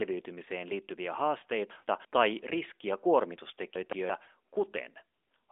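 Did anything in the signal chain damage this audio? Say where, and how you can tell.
Yes. At 1.40 s there is a brief dip or warble lasting about 20 ms, a lost AMR speech frame in this narrowband AMR-NB call path, which runs at 12.2 kbps with its band held to roughly 300 Hz to 3.5 kHz. One frame failed its checksum after radio errors, so the decoder filled the gap by reusing the last good pitch and vocal tract settings at falling gain, and the speech resumes by 1.43 s.

Between 1.71 and 2.05 s, ending just before "tai riskiä", and again between 3.76 and 4.10 s, the speech jumps and sounds jumbled. These are chunks out of order. Each span holds two blocks of about 171 ms, and the first block arrived or was written one chunk late, so it plays after the block that should follow it. Nothing is missing, but each swap leaves three hard joins. The chunk size points to the buffering, network or storage stage.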